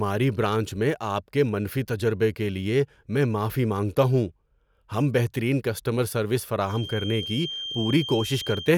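Speech clip with a feedback whistle: from 6.62 s to the end, a thin 3.2 kHz tone sits about 10 dB under the voice, likely a speaker-to-mic loop hovering right at the edge of feedback.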